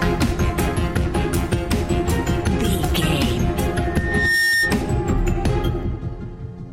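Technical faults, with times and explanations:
3.84 to 4.83 s, loudspeaker feedback squeal: a microphone picked up its own loudspeaker, and the loop gain passed unity at 1.8 kHz, so that tone fed on itself, swelling over roughly half a second into a piercing whistle that peaks a few decibels above the surrounding sound.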